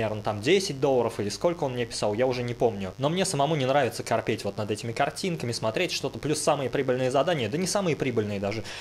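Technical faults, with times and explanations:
Throughout, mains buzz: a steady, raspy buzz sits under the sound for the whole clip, roughly 25 dB below it. Its fundamental is 50 Hz, but the rasp comes from sharp switching spikes, of the kind a dimmer, rectifier or poorly shielded cable lets in, arriving twice per mains cycle. Spikes that abrupt carry a dense comb of 50 Hz harmonics stretching up to several kHz, so the interference sounds edgy and gritty rather than like a smooth low hum.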